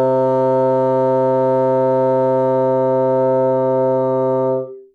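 Nothing goes wrong anywhere in this recording of sounds, so there's no fault to walk through here.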